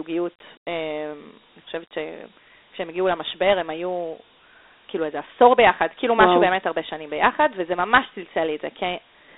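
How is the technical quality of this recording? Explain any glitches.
The technical quality is poor. The whole recording carries Dialogic VOX ADPCM coding damage that is plainly audible from start to finish.

Throughout, the speech sits in a telephone band of roughly 300 Hz to 3.7 kHz, with nothing above 3.8 kHz. The codec stores each sample as a 4-bit step relative to a running prediction, which fits about 32 kbps at 8,000 samples a second. Those coarse steps cannot track the waveform closely, so a gritty hiss rides along with the speech, over a thin, boxy tone.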